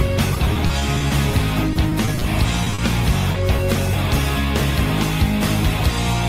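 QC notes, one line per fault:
0.35–1.35 s and 1.73–2.26 s, repeated packet loss (robotic sound): The audio turns choppy across both stretches. Short holes keep opening, nine in the first stretch and six in the second, none longer than about 20 ms. Each hole is patched by stretching the last received sound forward. About 14% of the first stretch and 21% of the second is rebuilt this way. The patches come so close together that the repetition itself gives the robotic colour.
2.64–2.68 s, 2.70–2.74 s, 2.74–2.80 s, 3.32–3.36 s and 3.56–3.60 s, short concealed packet loss: Each event is a brief smear or wobble. Between 20 and 40 ms of audio never arrived in time. The decoder filled each gap by continuing the preceding sound, then faded back into the real signal. The first three come almost back to back. The last two stand alone.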